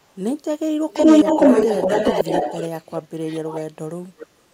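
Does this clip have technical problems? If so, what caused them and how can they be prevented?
Yes. Echo leak appears at 0.02–0.18 s, 0.93–2.67 s, 3.56–3.63 s and 4.19–4.26 s: a copy of the speech returns about 425 ms late, barely audible at first, louder than the speech itself across the long middle stretch, and well below it in the last two scraps. This is likely a far-end loudspeaker being picked up by a microphone whose echo canceller didn't fully remove it. On a spectrogram the harmonic patterns repeat, shifted 425 ms to the right. Using a headset or a better-tuned echo canceller would prevent it.

Speech suppressed in double talk occurs at 2.69–2.90 s, 3.21–3.55 s and 3.75–4.53 s. The speech level dips by roughly 15, 10 and 20 dB respectively, most heavily near the end. The likely cause is the canceller failing to separate the talker from the loudspeaker echo while both sides were active and turning both down. 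A waveform shows the envelope squeezed into notches. Full-duplex echo cancellation with gentler suppression would prevent it.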